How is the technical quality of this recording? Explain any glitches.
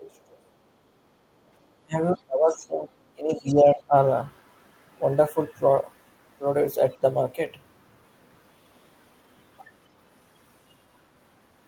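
The recording has echo-canceller trouble in its first four seconds, with three distinct faults.

Speech suppressed in double talk, from 0.0 to 0.2 s, 1.8 to 1.97 s, 2.14 to 2.93 s and 3.15 to 3.94 s: the talker's speech sinks sharply, by up to roughly 35 dB. The likely cause is the canceller mistaking overlapping talk for echo. Unlike background gating, the speech itself is what drops.

Background gated by the echo canceller, at 0.48 to 0.61 s (about 9 dB) and 0.78 to 1.31 s (about 7 dB): the canceller clamps the microphone while the loudspeaker plays. Only the room tone dips, shallowly and briefly, then recovers.

Other side's voice leaking through, at 2.49 to 2.53 s and 3.32 to 3.54 s: faint scraps of a second voice, some 20 to 30 dB below the speech. Uncancelled loudspeaker echo is the likely cause. Unlike the other two faults, this adds sound rather than removing it.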